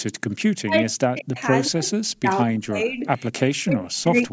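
From 0.6 to 1.37 s the speech dips and breaks up in pieces, sinking by as much as about 40 dB for roughly 0.4 s in total. This is likely speech suppressed in double talk: with both ends talking, the echo canceller turned the near talker down along with the echo. It differs from packet loss because the gaps follow the other side's activity rather than falling at fixed frame intervals, and some fragments thin out instead of vanishing.

From 1.37 to 1.42 s, a faint delayed copy of the voice appears, about 25 dB below the speech and 168 ms late. This is likely an echo leak, where the far end's loudspeaker audio reached its microphone and was not fully cancelled. A fixed 168 ms delay marks it as a returned copy and not room reverberation, which would trail off smoothly.

From 1.69 to 4.31 s the suppression returns, chopping the speech for about 1.5 s in total with drops near 40 dB. Within that stretch, two more echo leaks arrive at the same 168 ms delay: one at 2.09 to 2.39 s, about 30 dB down, and one at 3.24 to 3.54 s, closer at about 20 dB down. 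Both are short scraps. The call's microphone processing passes nothing above 8 kHz.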